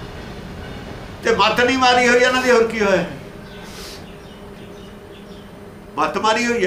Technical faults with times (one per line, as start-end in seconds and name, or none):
none